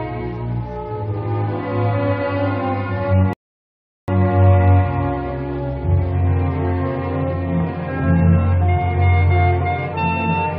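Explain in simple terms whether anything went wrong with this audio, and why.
At 3.33 seconds the sound suddenly drops to silence. It comes back at 4.08 seconds, picking up exactly where it stopped. This is a rebuffering stall. The player ran out of downloaded audio and waited for more. Nothing was lost, but about 0.75 seconds of dead air was added.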